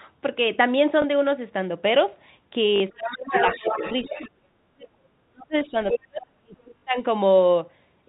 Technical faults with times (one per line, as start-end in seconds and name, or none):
1.02-1.04 packet loss with last packet repeated
2.76-2.80 packet loss with last packet repeated
2.91-3.33 speech suppressed in double talk
3.27-4.30 other side's voice leaking through
3.60-4.18 speech suppressed in double talk
4.66-6.95 speech suppressed in double talk
5.62-5.98 other side's voice leaking through
6.78-6.82 packet loss with last packet repeated